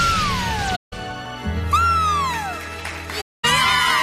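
At 0.75 to 0.93 s and again at 3.20 to 3.45 s, AAC frame loss with muting leaves soft-edged silent holes of about 171 and 235 ms, fitting runs of roughly eight and eleven lost frames. The spectrogram shows full-band blank columns, and the waveform tapers smoothly into and out of each gap.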